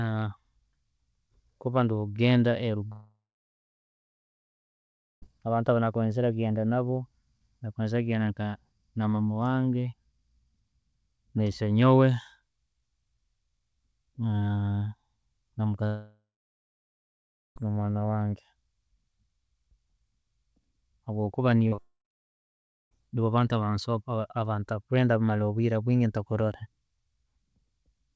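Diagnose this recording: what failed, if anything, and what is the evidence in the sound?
Long network dropout at 2.92–5.28 s (after "ndi wogenda", resuming at "abantu banakwenzire genda nabo"), 15.87–17.58 s (resuming at "no mwana wange") and 21.80–22.93 s (resuming at "nibo abantu"). The network stage likely stopped delivering audio. The receiver extended the last sound into a fading buzz, then left roughly 2, 1.3 and 0.9 s of silence. The lost audio never returns.

Short concealed packet loss at 21.68–21.74 s (40 ms) and 21.76–21.80 s (20 ms), just before the third dropout. The decoder received nothing for these gaps and synthesised a continuation of the preceding sound. Each gap sounds like a brief smear or wobble before the real signal blends back in.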